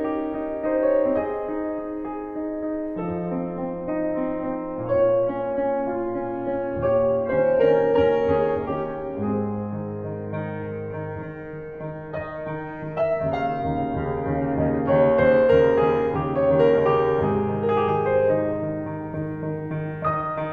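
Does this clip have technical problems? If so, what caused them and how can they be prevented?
Yes. From 2.96 to 14.96 s the music plays as an adaptive stream at a lower bitrate. The treble vanishes above 7.9 kHz, consistent with a fall from roughly 96 kbit/s AAC to 8 kbit/s HE-AAC. Unlike a dropout or buffering stall, the switches are instant and seamless, with no gap. Buffering more ahead, or setting a higher minimum bitrate, would prevent it.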